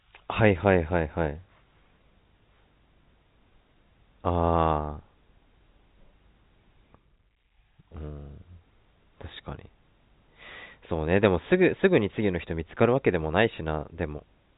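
No technical faults can be heard in this speech recording. It comes through G.711 telephone coding, so the sound is confined to the telephone band, with nothing above about 3.8 kHz.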